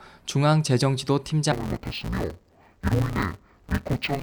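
From 1.52 s to the end, interleaved audio is read as planar. Short 5.8 ms blocks split wrongly, so the speech turns dull and robotic, buzzing near 172 Hz.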